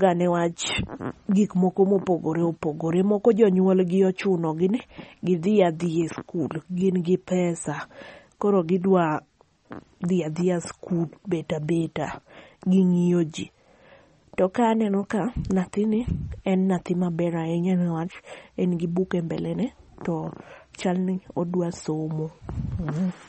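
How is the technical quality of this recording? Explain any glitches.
The recording is noticeably degraded. Throughout, nothing sounds above 8.4 kHz, and the speech sounds watery and swirly. This is likely MP3 compression at a low bitrate, around 32 kbps.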